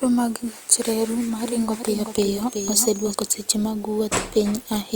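From 1.44 to 3.14 s, after "mag gach reru ma", the speech repeats as a dry, full-band copy trailing roughly 400 ms behind and about 5 dB quieter, starting and stopping abruptly before "seche mag". This doubled audio track likely comes from a slower second capture path mixed in.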